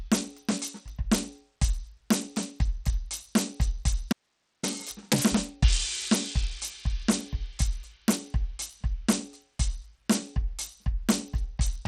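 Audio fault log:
Throughout: Bluetooth SBC compression, treble flickers and thins with gritty noise on the music, likely from a low bit pool starving the upper sub-bands, which fits about 80 kbps.
4.13–4.63 s: audio dropout to a faint residue, the music cuts abruptly for 0.51 s leaving only hiss, roughly 50 dB down, likely from a live path after the signal was lost.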